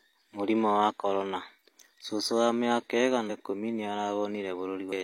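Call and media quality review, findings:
Compressed frames skipped, 3.25–3.30 s (after "cũcũ wa mĩaka") and 4.88–4.93 s: decoder drops roughly seven 46.4 ms frames, about 300 ms lost. Audio jumps ahead; spectrogram shows an abrupt discontinuity.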